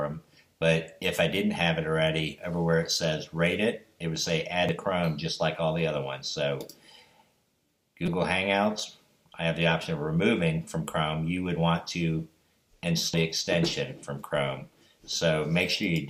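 Damaged data in the compressed stream causes short blips at 4.69 s, 8.06 to 8.08 s and 13.14 s. Corrupt frames are misread until the decoder resyncs.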